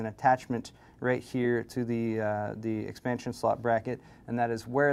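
No technical fault can be heard anywhere in the audio; the signal stays continuous and stable for its whole duration.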